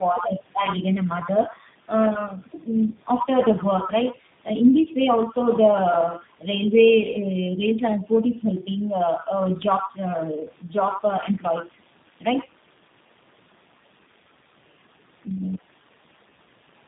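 Speech, with tandem speech coding throughout: the sound fits three speech codecs in sequence, likely AMR-NB, CVSD and a final G.729A, each re-encoding the previous one's output. The result is compounded roughness, muffling and warble, with nothing above 3.7 kHz.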